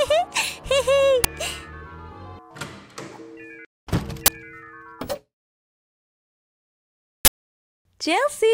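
Three times an uninitialised buffer reached the output before any audio was written into it, so leftover memory played as samples. Each is a short, loud crack or burst of digital noise, at 1.24 s, 4.26–4.28 s and 7.25–7.29 s, lasting 10, 20 and 40 ms.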